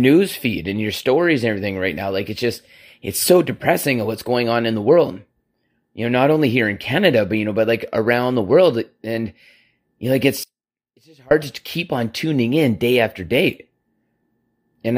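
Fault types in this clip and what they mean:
Audio dropout to a faint residue: The speech cuts out abruptly at 10.44 s, right after "you know like", and returns at 11.31 s with "to keep on tuning", a gap of about 0.87 s. Only a faint trace of the sound, roughly 30 dB below normal level, remains in the gap, likely because the signal feed broke while the path after it stayed live. Unlike a natural pause or fade, both edges are sudden and the gap is not truly silent.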